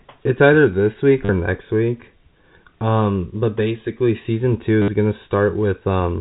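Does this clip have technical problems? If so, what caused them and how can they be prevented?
Yes. Packet loss with the last packet repeated causes two short robotic stutters in this telephone-band speech, at 1.25 to 1.29 s (40 ms, between "it's either this week" and "next week") and at 4.82 to 4.88 s (60 ms, just after "but basically season two"). The receiver replays the last packet, giving a brief buzz near 100 Hz, which fits 10 ms packets. That buzz sets it apart from a plain dropout, which would go silent. Adding a jitter buffer with proper loss concealment would prevent it.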